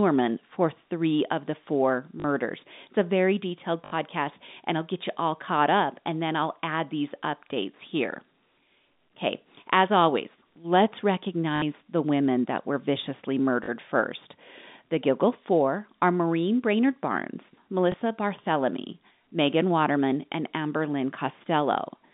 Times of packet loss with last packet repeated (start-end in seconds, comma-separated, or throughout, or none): 2.20-2.24, 3.86-3.92, 11.56-11.62, 13.64-13.68, 17.92